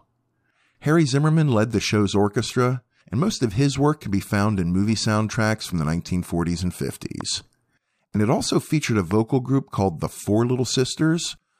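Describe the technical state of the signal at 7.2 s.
At 7.21 to 7.23 s a single loud pop sits on top of the speech, peaking roughly 5 dB above it. A brief voltage pulse, likely from a plug, switch, static discharge or driver glitch, has been added to the signal and shaped by the circuitry after it into a short thump. Unlike a dropout or an edit click, nothing is removed: the speech carries on unbroken beneath the pop.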